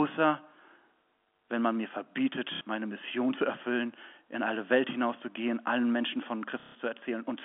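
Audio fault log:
2.55–2.61 s, packet loss with last packet repeated: a brief robotic stutter lasting 60 ms. The receiver replayed the last packet of audio to fill the gap, and the repeats ignore the pitch cycle, which fits two lost 30 ms packets.
6.60–6.75 s, packet loss with last packet repeated: a longer stutter of 150 ms that turns into a low buzz near 33 Hz under the narrow G.711 telephone band. The same packet repeats about five times at the packet rate before fresh audio resumes.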